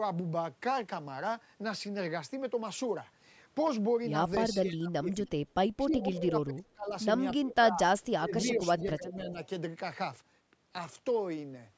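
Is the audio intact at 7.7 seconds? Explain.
No, the speech dips sharply between 7.37 and 7.81 s, falling by around 25 dB. This is likely speech suppressed in double talk: the echo canceller mistook the talker for loudspeaker echo and turned it down. Unlike a packet dropout, the level ducks rather than vanishing abruptly.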